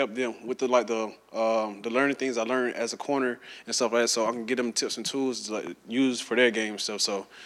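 At 5.67 to 5.69 s there's a single loud pop, a sharp click-thump sitting a few dB above the surrounding sound, which carries straight on underneath. It's most likely a brief voltage spike, say from a switch, static or a driver glitch, getting into the signal chain.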